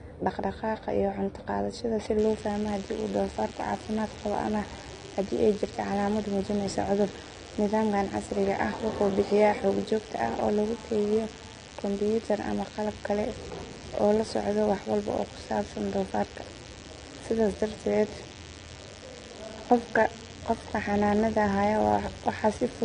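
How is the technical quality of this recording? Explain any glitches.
Technical quality is poor. Two faults are audible.

Throughout the clip, the speech sounds dull and smeared. Nothing is heard above 9.7 kHz. Sibilants fizz and warble plainly. This is likely AAC compression. The damage fits a low bitrate near 32 kbps. The coder strips the top band and coarsely quantises the rest.

From 2.18 s to the end, a DECT cordless phone buzz sits under the speech. It is a steady, thin 100 Hz buzz with many harmonics, around 20 dB below the speech. A nearby handset or base sends radio bursts every 10 ms. The audio circuit rectifies them into sound.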